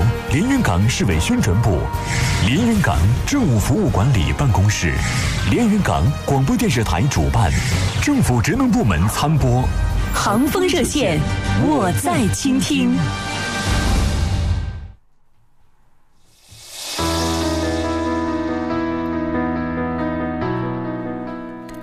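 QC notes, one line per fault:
13.38 to 21.38 s, periodic clock jitter: from here the sound picks up a rough, metallic edge that wasn't there before. The converter's clock is being nudged back and forth at a steady rate, somewhere around 300 Hz, so each component of the sound sprouts sidebands about that far above and below it. The higher material suffers most, which is why it's the top end that turns gritty.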